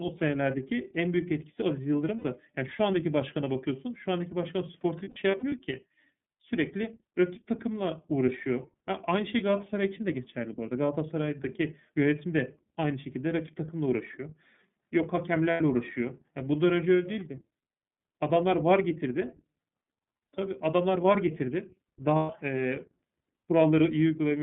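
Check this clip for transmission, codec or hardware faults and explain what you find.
Yes, there's a couple of things going on, both tied to a narrowband VoIP link.

The whole clip runs through the iLBC codec. Speech sits between 150 Hz and 3.6 kHz and sounds clear but rough and synthetic, which fits iLBC's 13.33 kbps, 30 ms frame mode.

Lost iLBC frames show up at 2.16 to 2.25 s, 5.03 to 5.52 s (scattered, longest gap around 70 ms), 15.51 to 15.63 s and 22.16 to 22.31 s. The decoder repeats the last pitch cycle with added noise, giving a brief buzzy, held vowel before the voice snaps back.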